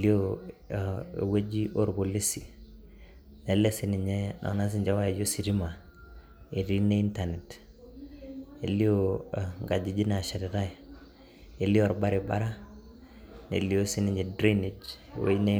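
Speech recording with no audible technical faults.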